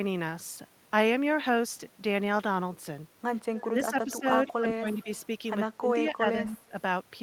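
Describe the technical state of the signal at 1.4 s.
At 1.4 s the speech signal is intact, with no dropout, distortion, clipping or other audible fault.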